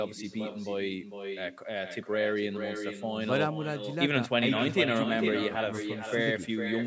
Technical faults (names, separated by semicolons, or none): echo with no canceller